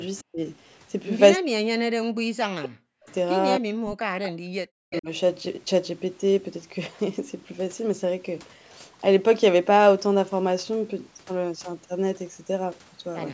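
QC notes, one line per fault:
0.17–0.24 s, 3.04–3.14 s, 4.24–4.29 s, 4.91–5.01 s: echo leak. A delayed copy of the speech trails it by 255 ms. It starts about 30 dB below the speech and grows to about 15 dB below by the last burst. Likely a speakerphone echo canceller letting residual echo through.
0.29–0.41 s, 1.38–3.07 s, 3.59–3.93 s, 4.50–5.08 s: speech suppressed in double talk. The speech drops sharply, by roughly 40 dB at its deepest. The longest stretch lasts about one and a half seconds. Likely the canceller turning down this side's voice along with the echo during overlapping talk.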